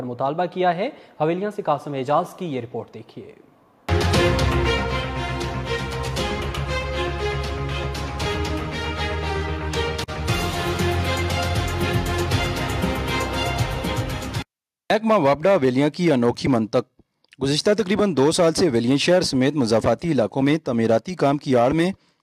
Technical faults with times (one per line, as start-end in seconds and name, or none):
none